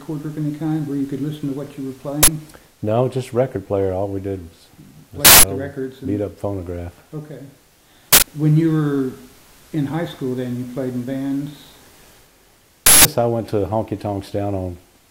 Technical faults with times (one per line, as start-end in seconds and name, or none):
2.23-2.28 uninitialised buffer
5.25-5.43 uninitialised buffer
8.13-8.22 uninitialised buffer
12.86-13.05 uninitialised buffer